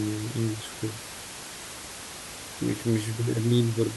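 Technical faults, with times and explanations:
0.93–1.55 s, CD scratch ticks: six brief ticks, each a couple of milliseconds at most, clicking through the speech on each turn of the disc past a surface blemish. The player interpolates or mutes samples the error correction cannot rebuild, leaving these tiny gaps.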